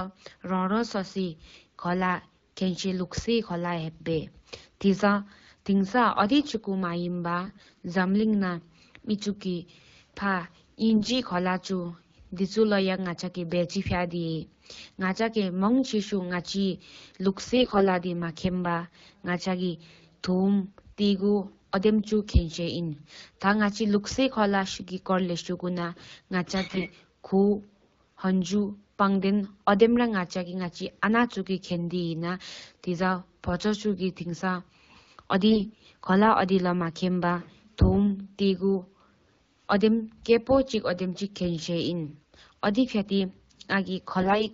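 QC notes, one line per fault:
7.45–7.83 s, 10.96–11.17 s, 17.56–17.87 s, 26.67–26.87 s, 35.50–35.77 s, 44.22–44.47 s, AMR bit errors: speech abruptly turns hoarse and gargly while pitch and loudness roughly hold. Corrupted unprotected bits misplace the excitation pulses and skew the fine gain and spectral values, which suggests roughly 7 to 10 percent bit errors. On a spectrogram, harmonics smear into scratchy broadband noise, and the waveform envelope stays near normal.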